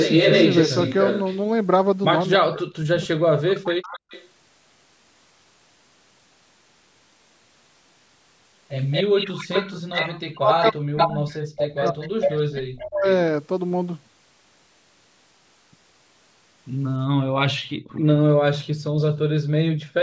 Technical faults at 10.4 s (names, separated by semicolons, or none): echo leak; speech suppressed in double talk